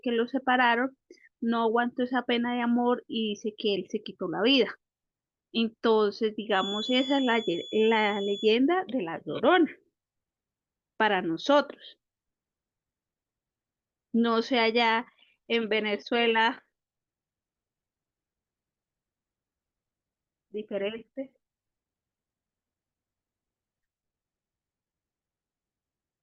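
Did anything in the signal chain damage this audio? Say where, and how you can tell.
Yes. From 6.48 to 8.58 s a thin, steady whistle near 3.4 kHz sits behind the speech, roughly 15 dB below it, swelling and fading slowly in level but never building up. That is a feedback whistle, likely from the acoustic loop between the playback loudspeaker and the microphone running just at the edge of instability, so one high frequency keeps recirculating at near-constant gain instead of either dying away or howling out of control.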